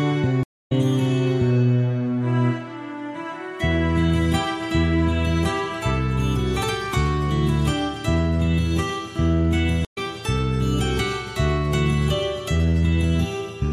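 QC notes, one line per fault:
0.43–0.72 s, stream reconnect: the connection dropped, leaving a 246 ms silence before a fresh decoder restarted mid-stream, resuming roughly a fifth of a second later.
9.85–9.98 s, stream reconnect: another brief break, 89 ms of silence, then the restarted decoder picks up about a tenth of a second further on.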